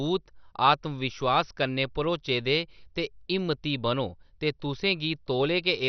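From start to end, the speech sounds dull and gurgling, with nothing above 6.2 kHz. This is likely MP2 compression at a low bitrate, switching off upper sub-bands and coarsely quantising the rest.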